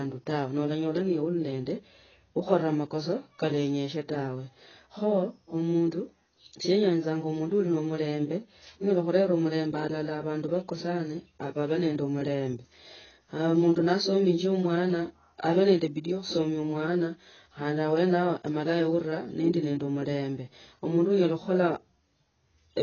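AAC compression damage runs through the whole clip, from start to finish. Nothing is present above 6.8 kHz, so the speech sounds dull and boxed in. Sibilants come out smeared and fizzy, and sustained sounds carry a watery warble. The likely cause is heavy AAC-LC coding at a very low bitrate, consistent with something around 16 kbps. The encoder discards the top band and quantises what remains so coarsely that detail breaks up.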